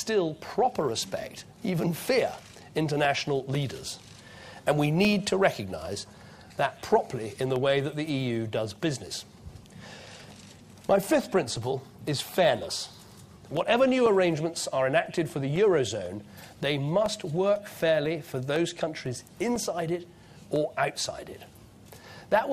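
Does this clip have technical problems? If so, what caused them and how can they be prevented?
Yes. Periodic USB or driver dropouts run from 0.05 s to 22.05 s. Every 0.5 s, about 50 times in all, a background task stalls the USB bus or audio driver, leaving a gap of around 2 ms of silence that is heard as a regular tick wherever there is sound. To prevent it, find and disable the background process that polls at that interval, and update the audio driver or move the interface to a dedicated USB controller.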